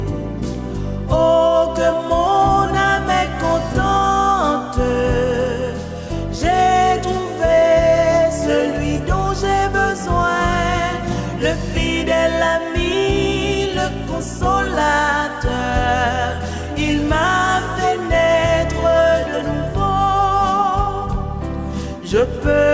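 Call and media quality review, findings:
No findings in this call and media quality review.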